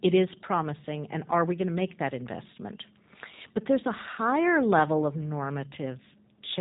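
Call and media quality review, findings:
G.729 codec damage, throughout. Speech band-limited, nothing above 4 kHz; plainly rough, synthetic texture. Probable component: VoIP encoder, consistent with G.729A at 8 kbit/s. Mechanism: each 10 ms frame rebuilt from vocal tract filter, pitch predictor and sparse pulses, discarding fine detail.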